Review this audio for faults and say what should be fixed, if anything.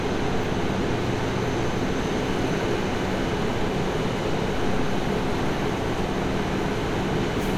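No faults turned up in the review, so nothing in this recording of sounds needs to be fixed.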